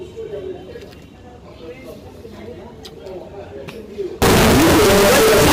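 From 4.22 s to the end, the sound turns abruptly into a loud, harsh, nearly square buzz at an almost fixed, high level, with background noise as loud as everything else. This is the signature of float read as integer: 32-bit float samples likely interpreted as 32-bit integers, so sign and exponent bits dictate the level.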